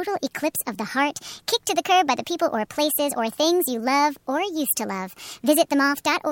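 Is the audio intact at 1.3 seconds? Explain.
No. At 1.3 seconds the speech sounds high and hurried, running about 1.38 times too fast and pitched roughly 5.5 semitones up, and this holds for the whole clip rather than just that moment. This is a wrong sample rate fault: the samples are played out faster than they were captured, with no conversion, so speed and pitch rise together by the same ratio. That ratio fits audio recorded at 32 kHz being played back at 44.1 kHz.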